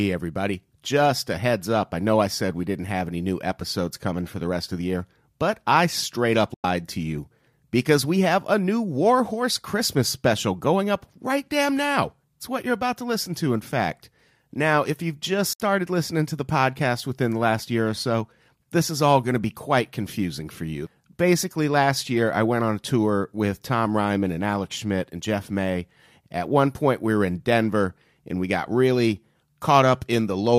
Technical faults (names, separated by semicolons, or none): digital broadcast dropout